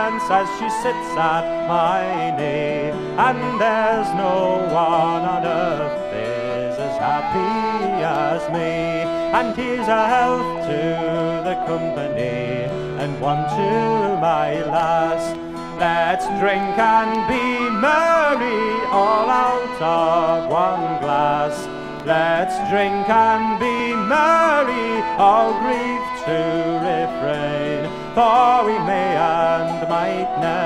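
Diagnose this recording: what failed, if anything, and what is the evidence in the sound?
Two brief skips break the audio, at 4.07 s and 23.80 s. At each one the sound jumps forward with no gap of silence. The first skip is roughly 10 ms, the second shorter, around 5 ms. The failure sits at the driver and buffer stage, likely a dropped buffer (overrun). The capture software fell behind, and the hardware overwrote samples before they were read. The surviving audio on either side was spliced together, leaving a jump at each join.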